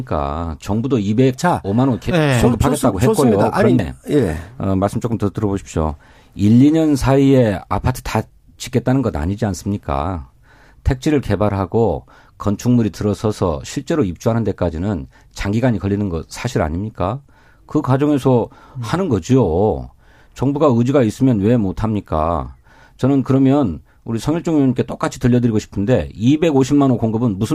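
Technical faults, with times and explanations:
3.79 s, damaged data in a compressed stream: a brief glitch in the speech where corrupted bytes made the decoder misread frames and resync at the next header. On a spectrogram it shows as a thin broadband vertical smear; the waveform shows a sudden discontinuity.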